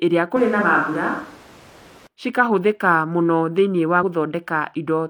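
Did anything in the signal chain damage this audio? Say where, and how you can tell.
Yes. From 0.36 s to 2.07 s the sound turns abruptly roomy and hollow, thinner in the low end, with background noise sitting roughly 25 dB below the speech, then snaps back just as suddenly. The level barely moves. This points to a switch to a distant microphone at the capture stage, likely because the close mic's feed dropped out. Added reverb or EQ would fade in rather than switch instantly at both edges with a new noise floor.

Two brief glitches, at 0.58 to 0.63 s and 3.99 to 4.04 s, each about 50 ms, come from damaged data in a compressed stream, at the codec or storage stage. Corrupt bytes made the decoder misread frames, lose sync and hunt for the next valid header. The result is a brief disruption in the sound. Network packet loss would instead leave a gap or a smeared, concealed patch rather than this loss of frame sync.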